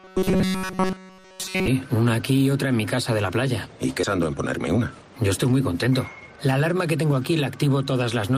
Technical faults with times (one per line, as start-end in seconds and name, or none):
0.01-1.67 robotic sound from repeated short buffers
4.03 skip ahead
4.76-6.37 jitter buffer speed-up